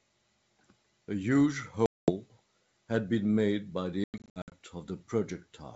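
Around 1.86 s there's a burst of packet loss on what sounds like a G.722 ADPCM call, roughly ten packets, about 220 ms of hard-edged silence running to 2.12 s. Between 4.04 and 4.54 s there's a scrappier run: about fifteen packets, 300 ms in total, scattered across 480 ms, the longest gap 100 ms. After each hole the decoder's predictor and step size have drifted from the sender's, so speech comes back slightly distorted before settling within a few tens of milliseconds.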